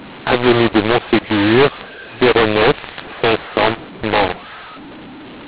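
From start to finish the speech sounds harsh and gritty, with levels jumbled and pauses filled with hiss instead of silence. It is a mu-law and A-law mix-up: telephone audio written in G.711 mu-law was read back as A-law, scrambling the sample levels.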